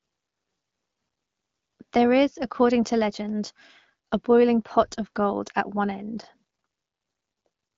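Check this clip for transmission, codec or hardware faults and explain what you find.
No transmission, codec or hardware faults.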